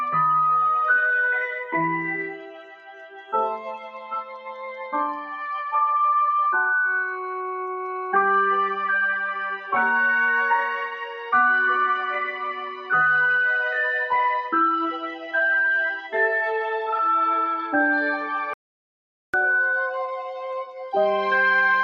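A speech-tuned noise suppressor has been left running across this whole clip, and it's treating the steadier, held parts of the audio as noise. Throughout, the level keeps breathing by a few decibels as it clamps down on sustained material and lets sharper onsets through, so the sound pumps a little and loses some body, especially in tails that should ring out naturally. The clearest sound cut by the noise suppressor comes early. From 2.34 to 3.33 s the level sags by about 14 dB. A second dip follows from 3.58 to 4.53 s at about 11 dB down. There's a shorter one from 12.75 to 12.91 s, about 8 dB. In each case the held content sinks while anything percussive mostly survives. Later there's an audio dropout to silence from 18.54 to 19.34 s, roughly 0.8 s where the sound cuts off dead and comes back mid-flow. The gap is silent with no room tone at all, which means whatever was happening in that stretch is simply gone. 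That points to the input briefly disappearing, likely a momentary disconnect or mute upstream, while the recorder kept writing silence.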